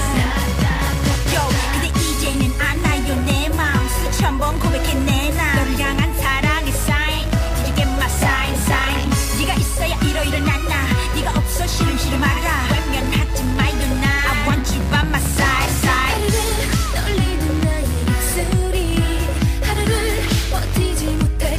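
Mains buzz runs from 10.66 s to 18.66 s in this audio, a steady, raspy buzz sitting roughly 20 dB below the wanted sound. Its fundamental is 60 Hz, and the harsh edge comes from sharp switching spikes, two per mains cycle, entering through something like a dimmer, a rectifier or a missing shield. Because each spike is so abrupt, the interference carries a dense ladder of 60 Hz harmonics climbing into the kilohertz range rather than a clean low hum.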